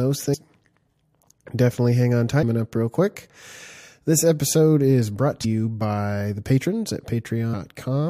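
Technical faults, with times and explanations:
0.33–0.35 s, 2.42 s and 5.44 s: damaged data in a compressed stream. Each is a brief glitch of about 20 ms, the second falling between "definitely hang on" and "up real quick", the third just after "episode is brought". Corrupted bytes make the decoder misread a frame, lose sync and jump to the next valid header.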